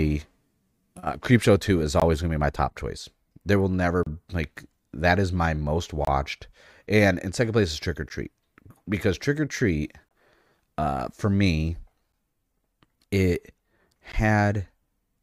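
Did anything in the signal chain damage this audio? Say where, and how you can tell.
Yes. Gaps between stream segments at 2.00, 4.03–4.07, 6.05–6.07, 8.09, 10.09–10.11, 12.12 and 14.12 s leave hard-edged silent holes of about 11 to 31 ms roughly every two seconds. This points to the streaming or playback stage. Mismatched segment timestamps leave gaps that the player fills with silence, while no speech is lost.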